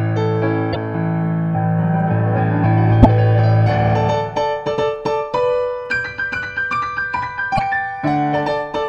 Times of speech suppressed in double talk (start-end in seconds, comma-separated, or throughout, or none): none